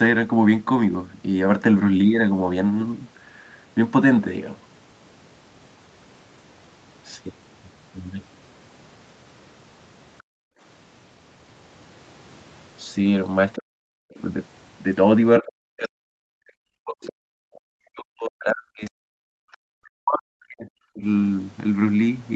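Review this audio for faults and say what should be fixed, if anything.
Other side's voice leaking through. Faint scraps of a second voice appear at 10.18–10.23 s and 17.03–17.07 s. A longer stretch runs from 18.28 to 19.57 s. The first is very faint, far below the main speech. The later ones are louder but still well beneath it. This is likely loudspeaker playback reaching the microphone, where the echo canceller left a residue. Fix it by improving echo path modelling or lowering the loudspeaker level.

Background gated by the echo canceller. The room sound drops out from 10.23 to 10.6 s, by about 38 dB. It drops again from 19.13 to 19.5 s, by about 40 dB. Both gaps come with leaked echo. The canceller clamped the microphone hard while playback ran, then released it. The background falls to near silence and snaps back. Fix it by softening the suppressor and adding comfort noise during attenuation.

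Speech suppressed in double talk. The talker's voice dips or cuts out in pieces from 13.56 to 14.2 s. The drops cover most of that stretch. It happens again, more extensively, from 15.4 to 21.03 s, with gaps adding up to around four seconds. The deepest drops are around 40 dB. Both sides likely spoke at once, so the canceller attenuated the near talker along with the echo. Fix it with better double-talk detection that preserves near-end speech.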